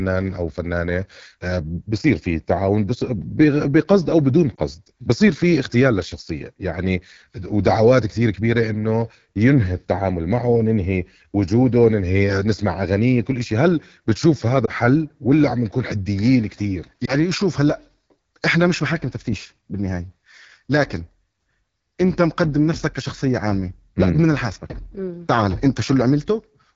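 Throughout the speech, the AMR wideband (HD Voice) codec leaves a rough, raspy edge. The sound points to its 8.85 kbit/s mode, one of the two lowest rates. Unlike broadband hiss, the roughness follows the voice itself, with a thin, noisy top above about 6.4 kHz.

At 4.55, 14.65 and 17.05 seconds come lost AMR speech frames, each fitting one missing 20 ms frame. The decoder briefly repeats its last pitch and vocal tract settings at lower gain, so each gap is a short warble or dip rather than a hard click or silent dropout.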